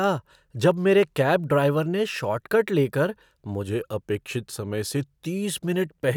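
At 3.67 s the speech suddenly slows and drops in pitch. Both change together, by about 6.4% in speed and 115 cents in pitch, just over a semitone. The voice sounds flat and dragged. At 5.26 s it snaps back to normal. This is a drift correction step. Clock-matching software likely changed the playback rate in one jump to rebalance its buffer, then restored it.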